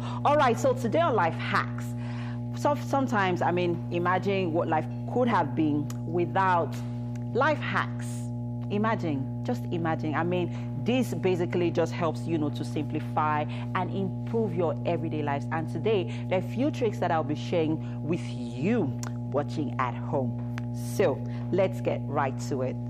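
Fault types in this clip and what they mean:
Mains hum: a steady 60 Hz tone runs under the whole clip, loud enough to sit only slightly below the wanted sound. It comes from the power line leaking into the signal, through a ground loop or a nearby transformer.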